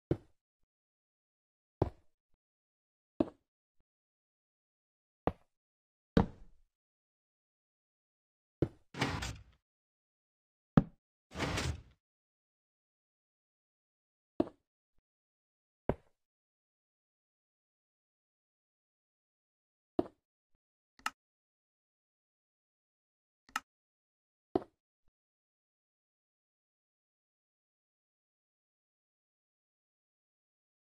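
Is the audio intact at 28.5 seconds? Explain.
Yes, the audio is intact at 28.5 seconds, with no dropout, distortion or other fault audible at that point.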